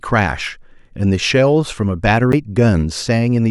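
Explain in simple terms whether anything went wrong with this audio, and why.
A CD skip happens at 2.32 seconds in this speech. It sounds like a tiny tick followed by an abrupt jump, as if a sliver of the recording has been cut out or repeated. Its cause is the player's laser losing its place on the disc, which can happen from a bump or a flaw in the disc surface, and landing on another turn of the disc's spiral track. The player goes silent for roughly a hundredth of a second and then carries on from that new spot.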